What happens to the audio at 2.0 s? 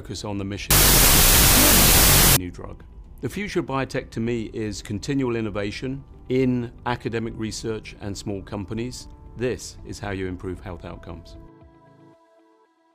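Wrong sample width, from 0.71 to 2.37 s: 32-bit float data read as 16-bit integers, giving loud noise over a buried sound at half speed, an octave down.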